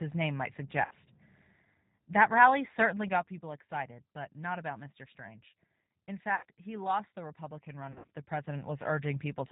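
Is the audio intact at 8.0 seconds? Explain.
No. From 7.92 to 8.08 s the speech is smeared into a buzzy tone or coloured noise, then fades and stays weak. This is VoIP packet loss concealed by the speech codec: about 120 ms went missing in gaps scattered over 160 ms, the longest run 60 ms, and the decoder filled them by repeating its last pitch and filter at falling gain. Throughout, the G.729 codec also makes the speech rough and synthetic and removes everything above 4 kHz, because it rebuilds the voice from a few pulses per frame at 8 kbit/s.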